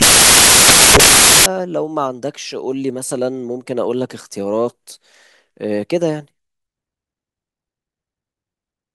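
From 0.00 to 1.46 s the speech is replaced by loud broadband noise. These are samples built from the wrong bytes. Each value was assembled with its bytes misaligned or swapped. The rapidly changing low bits became the dominant part, giving a harsh hiss.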